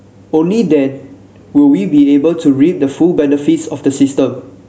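Speech with gain pumping throughout: the gain swings by about 10 dB, ducking under each loud syllable, likely from excessive gain into a fast limiter. A noise gate would silence those pauses instead.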